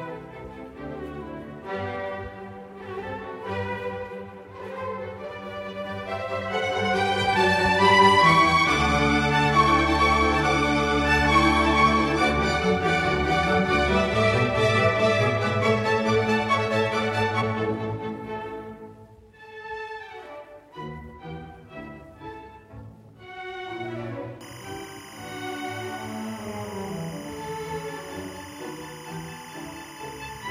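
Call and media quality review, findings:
Timecode bleed, 24.41 s to end of clip (30.51 s). Steady chirping warble behind the audio, about 20 dB below it. Probable component: LTC track or cable adjacent to the audio path. The square-wave code alternates between tones near 1 kHz and 2 kHz at a 25-frame-per-second rate, coupling into the signal as a constant buzzy chatter.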